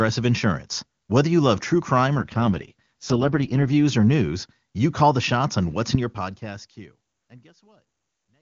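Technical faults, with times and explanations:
2.18–3.67 s, AMR rate drop: after "you love true crime" the speech turns rough and synthetic until "or news you call". That fits the network forcing AMR-WB from its top rate down to around 6.6 kbit/s. The band stays the same and nothing drops out, unlike packet loss or a bandwidth switch.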